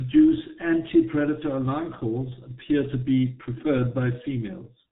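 G.723.1 codec damage runs throughout the speech, heavy from start to finish. Nothing above 4 kHz survives, and the coarse 30 ms frames smear consonants, leaving the speech muffled and hoarse. This fits a bitrate near 6.3 kbit/s.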